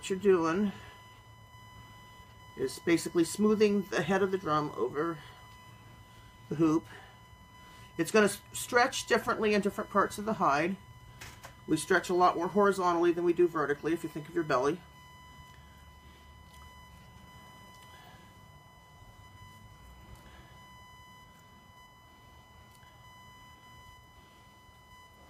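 A steady, fixed-pitch whine at 1 kHz runs under the audio for its whole length, sitting roughly 30 dB below the main sound, with 1 kHz as its strongest component. This is USB whine: the USB bus draws current in regular 1 ms frames, and that pulsing load leaks into the audio path through the shared power or ground, so the 1 ms rhythm turns into an audible 1 kHz tone.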